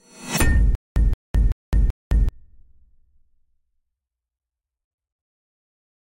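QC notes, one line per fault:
0.35–0.40 s, corrupt frame decoded: A short burst of wrong-sounding noise lasts about 50 ms, or roughly two frames. Damaged bits in the compressed data were decoded anyway. Energy lands at wrong frequencies and peaks near -20 dBFS.
0.75–2.29 s, stutter with silent gaps: A 173 ms fragment of sound plays four times. Each repeat is followed by 211 ms of digital silence, giving a steady 384 ms cycle. The likely cause is a stalled player replaying its last fragment at each retry. The sound meant for this stretch is lost.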